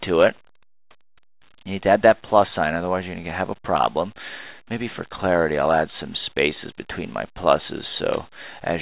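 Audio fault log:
No faults found.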